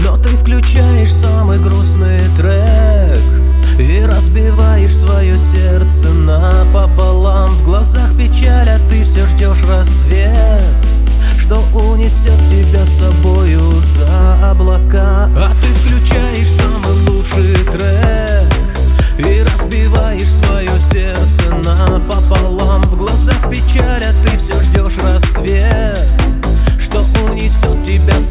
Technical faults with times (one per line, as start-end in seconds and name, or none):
none